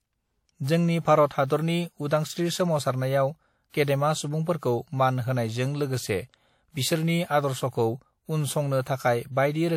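At 1.47 s, a sharp speech attack is preceded by pre-echo lasting about 32 ms. At 3.70 s it recurs, spreading about 44 ms. Coding noise meant to mask the loud onset leaks back into the quiet just before it, giving a short hiss and a softened attack. On a spectrogram this shows as broadband smear before the onset. On the waveform, low-level noise rises ahead of the transient.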